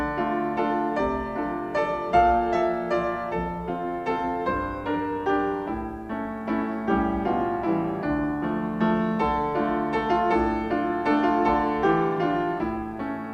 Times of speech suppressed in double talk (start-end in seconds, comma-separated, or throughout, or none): none